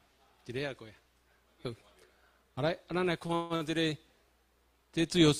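Between 3.19 and 3.63 s the clip shows repeated stalls (stutter): packets reached the receiver late, so its jitter buffer ran dry four times in quick succession. Each time, playback held and stretched the last sound to cover the wait, fading it during the longest hold of 148 ms. Concealment fills about 229 ms, roughly half that stretch, so nothing is lost, but the audio there drags and stutters before resuming its normal pace.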